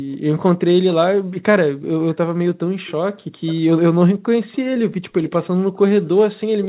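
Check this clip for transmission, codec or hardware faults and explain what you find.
One fault turns up: an echo leak, heard three times. At 3.46 to 3.59 s, 4.52 to 4.58 s and 5.28 to 5.49 s, a faint, delayed copy of the speech trails in about 330 ms behind, well below the main voice. This likely comes from a loudspeaker on the far end whose echo canceller let part of the microphone's pickup return down the line.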